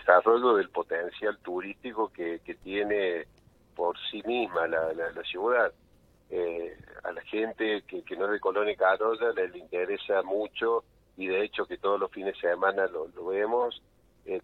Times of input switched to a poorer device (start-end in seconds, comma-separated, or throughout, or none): none